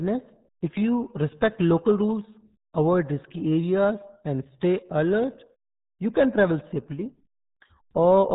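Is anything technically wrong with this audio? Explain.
Yes. Throughout the speech, the RealAudio 14.4 codec leaves heavy damage: nothing above 3.8 kHz survives, and the speech turns muffled and gargly, which fits an 8 kbit/s coder discarding detail. A plain telephone-style filter would sound dull but clean, without that gargle.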